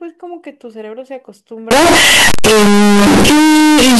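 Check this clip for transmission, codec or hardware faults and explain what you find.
One fault is present.

From 1.71 s to the end, the speech becomes a very loud, harsh, near-square buzz at an almost fixed, high level. Noise rises to match the speech, yet pitch remains traceable. The likely cause is float read as integer: 32-bit float samples decoded as 32-bit integers, so sign and exponent bits set the level. Unlike clipping, even quiet passages jump to that same loudness.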